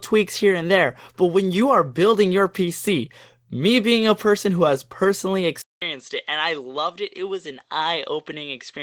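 From the start, Opus voice compression at 16 kbps in hybrid mode leaves the speech plainly coded: coarse excitation, hoarseness and a faintly robotic edge across the band. At 5.62 s a 200 ms silence is followed by duller, quieter sound, roughly 10 dB down and cut off above 7.9 kHz, with a faint new noise floor; the likely cause is an input switched to a poorer device.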